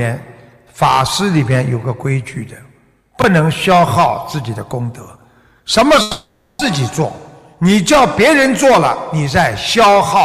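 Chunks out of order at 3.20 to 3.24 s and again at 5.16 to 5.24 s. A 20 ms chunk arrived late and played one position too late the first time and three positions too late the second, so nothing is missing but the sequence is scrambled. Each spot sounds like a brief jumbled stutter.

Long network dropout from 6.01 to 6.61 s, likely caused by about 580 ms of audio never arriving. The receiver fills the whole gap by extending the last sound as a fading buzz or hiss, with no stretch of true silence, before the audio resumes further on without the lost section.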